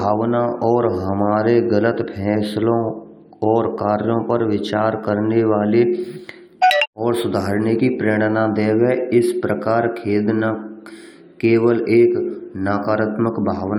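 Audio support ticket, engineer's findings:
No technical fault found on listening; the speech signal shows no audible defect anywhere in the clip.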